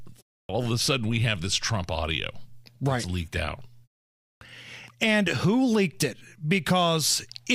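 The output device is dropping into a low-power state during silence in this speech recording and needs a moment to wake before it plays anything, which produces a clipped start after a pause. After a 0.31 s gap, the opening 41 ms are swallowed at 0.45–0.49 s, so "of a sudden we" begins abruptly. After a 0.58 s gap, another 42 ms vanish at 4.37–4.41 s.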